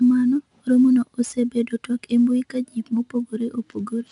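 Throughout, 4-bit ADPCM compression codes each sample as a coarse predicted step. This lays a level-following gritty hiss over the speech, with nothing above 10.6 kHz.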